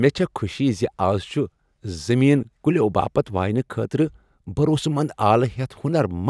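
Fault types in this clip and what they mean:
No technical faults can be heard in this speech recording. There is nothing here to list under any fault type.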